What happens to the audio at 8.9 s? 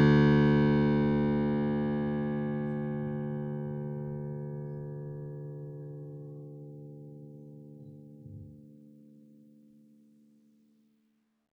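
At 8.9 s the music plays through cleanly, with no dropout, click, distortion or other audible fault at that moment.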